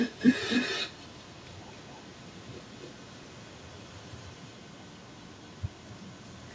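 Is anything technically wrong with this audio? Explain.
Yes. Throughout the speech there is echo with no canceller: the far end's loudspeaker feeds its microphone, returning the talker's own speech about a third of a second later, only about 3 dB quieter and thinner. Unlike room reverberation, it is a distinct delayed repeat, not a smooth decaying tail.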